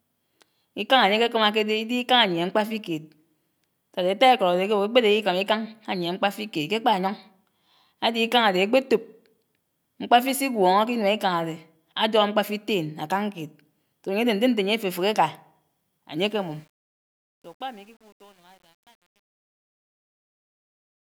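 Speech fades out over the last few seconds, and from 16.17 s to the end the fade carries truncation distortion, worst from 16.8 s onward. The gain stage rounds to too few levels without dither, which fits roughly 9-bit output. On the waveform the tail shows blocky steps, and on the spectrogram it shows a grainy, broadband haze.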